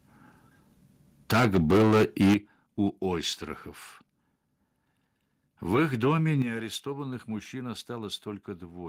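From 1.3 to 2.34 s the speech has microphone overload. Peaks run about 10 dB over the limit, and roughly a fifth of samples are flattened, giving harsh crackle. Input gain was likely set too high. The microphone volume steps down at 1.33 s by about 3 dB, at 2.34 s by about 11 dB, and at 6.42 s, after "их доме", by about 8 dB. These sudden level drops are likely automatic input-volume cuts.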